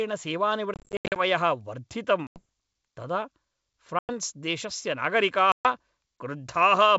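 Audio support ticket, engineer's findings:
Packet loss on an ADPCM call: silence-filled gaps desync the decoder's predictor and step size. Hard-edged holes at 0.74–1.22 s (scattered, longest 80 ms), 2.27–2.44, 3.99–4.10 and 5.52–5.66 s. Speech returns slightly distorted, and settles within tens of ms.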